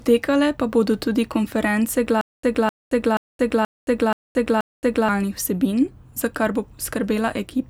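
Right after "bodo tudi konference", from 2.21 to 5.09 s, there's a stutter with silent gaps. The same 257 ms scrap repeats six times, each followed by about 222 ms of dead silence, roughly every 480 ms. It's likely a stalled stream replaying its last buffer, so that stretch is lost before "vsebin za kar bo".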